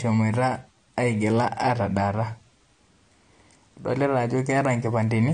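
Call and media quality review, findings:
Dull, band-limited speech the whole way through, nothing above 9.8 kHz, with a smeared, warbly texture on sibilants. Likely AAC compression (AAC-LC) at a low bitrate, fits around 32 kbps. Coarse quantisation drops the highs and leaves spectral holes.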